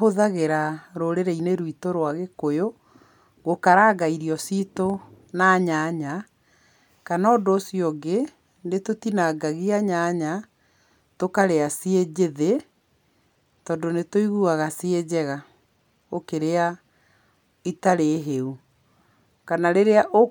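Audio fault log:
No technical faults are present in this speech recording.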